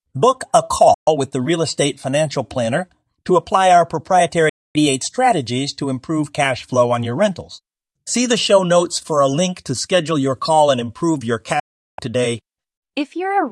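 Three digital broadcast dropouts interrupt the speech, at 0.94 to 1.08 s, 4.49 to 4.76 s and 11.60 to 11.99 s. Each time the receiver lost valid frames and muted, so the sound fades out over about 3 ms into silence. Losses of 128, 256 and 384 ms fit whole frames discarded, and the programme resumes later, with that material gone.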